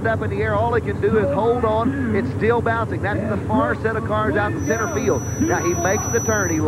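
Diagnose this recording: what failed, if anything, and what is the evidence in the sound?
A feedback whistle sets in at 4.55 s and holds to the end of the clip at 6.68 s: a thin, steady tone at 5.9 kHz sitting roughly 10 dB under the programme, swelling and fading slowly in level without building up. The stage is the analogue acoustic path, likely a loudspeaker feeding back into the microphone with loop gain just short of runaway, so one frequency sustains rather than howling.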